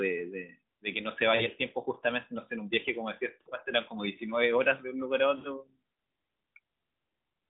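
Speech over an AMR narrowband phone link, band-limited to roughly 150 Hz to 3.7 kHz with only light codec roughness. It has three spots of lost AMR speech frames, at 1.36 to 1.49 s, 3.42 to 3.49 s and 5.38 to 5.53 s. Each is a short, smeared, drawn-out stretch where the decoder, missing frames that failed their checks, keeps repeating the last good pitch and vocal tract shape while fading the level. The voice then comes back a bit rough. The first two gaps fit about 40 ms lost, or two 20 ms frames, and the last fits about 60 ms.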